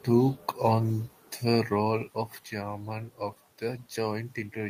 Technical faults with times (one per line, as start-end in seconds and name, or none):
none